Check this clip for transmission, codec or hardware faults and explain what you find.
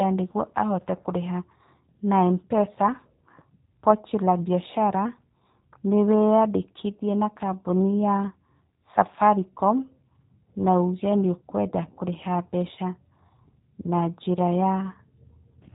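The recording carries one fault for its whole length: G.729 codec damage, plainly audible. The speech has passed through this low-rate voice codec, which rebuilds each 10 ms frame from a vocal tract filter, a pitch predictor and a few fixed pulses rather than the original waveform. The result sounds slightly rough and synthetic, which fits an 8 kbit/s link. A spectrogram shows a hard ceiling at 3.8 kHz with nothing above it.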